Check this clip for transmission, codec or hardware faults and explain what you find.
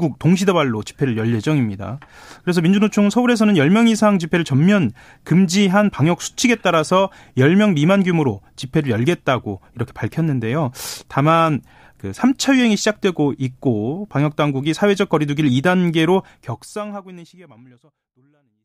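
No transmission, codec or hardware problems can be heard in this speech recording, and its only level change is an editor's smooth fade-out that begins around 16 s and runs down to 18.6 s without any step or click.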